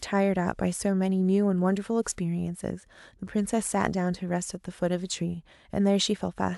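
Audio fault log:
No faults can be heard anywhere in the speech.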